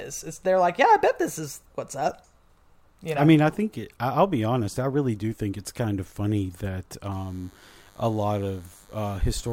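From 7.11 s, right after "kind of funny that", DECT cordless phone buzz runs to the end of the clip. A nearby handset or base pulsing every 10 ms is being rectified in the audio path, giving a thin, steady 100 Hz buzz rich in harmonics, about 35 dB below the speech.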